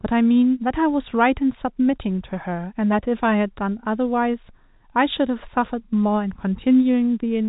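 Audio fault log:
No faults detected.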